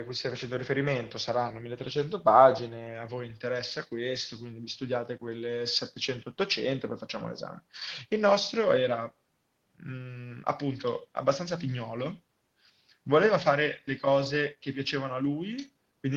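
No technical faults can be heard anywhere in the speech recording. Nothing in the audio points to a problem with how it was captured or delivered.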